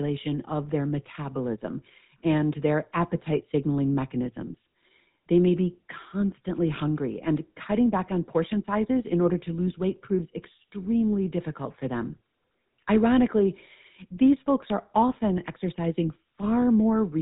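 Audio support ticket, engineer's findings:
GSM full-rate codec, whole clip. Buzzy, gravelly roughness on the speech; band ends near 3.8 kHz. Probable component: GSM full-rate encode in the call path, consistent with 13 kbps. Mechanism: vocal-tract model driven by a thinned regular-pulse excitation, hence the grit. Distinguished from plain low-pass filtering by that rasp, and from MP3-style artefacts by the absence of warbling or swirling.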